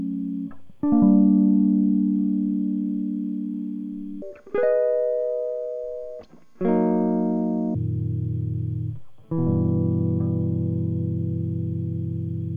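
From 4.22 s to 7.75 s a section plays at the wrong speed. The music runs at twice its recorded rate, so tempo and pitch jump together, with pitch rising by roughly ten semitones. The likely cause is playback or editing against a mismatched clock.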